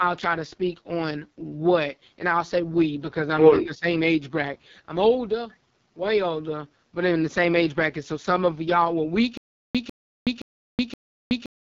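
Across the whole clip the speech sounds rough and raspy, and nothing is present above about 7.3 kHz. This is heavy damage from the AMR wideband (HD Voice) codec. The model rebuilds the voice from a sparse pulse excitation and fills the top band with shaped noise. At this low a rate there aren't enough bits to do that cleanly, and the harshness fits the 6.6 kbit/s mode.

From 3.62 to 3.87 s the voice briefly sinks and thins out, dropping by around 15 dB at its deepest over roughly a fifth of a second in total, before recovering. This is speech suppressed in double talk. The likely cause is that both ends were talking at once, so the echo canceller could not tell this talker apart from returning loudspeaker echo and pulled the level down.

From 9.37 s to the end, a 148 ms fragment of sound repeats four times. Each repeat is followed by 373 ms of dead digital silence, so the burst returns on an even 521 ms cycle. 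This is a stutter with silent gaps. The stream likely stalled, and on each retry the player replayed the last buffered piece and then ran dry. Whatever audio should have filled that stretch is lost.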